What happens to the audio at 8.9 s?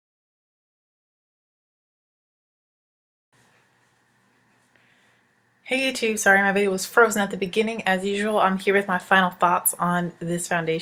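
Nothing goes wrong at 8.9 s; the audio plays through that moment intact, with no dropout, click, glitch or other fault.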